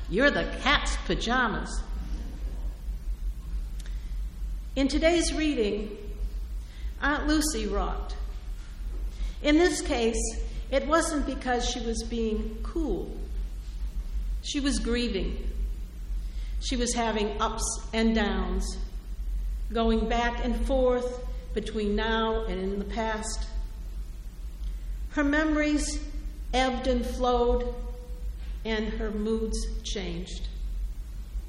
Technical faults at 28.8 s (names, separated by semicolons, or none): none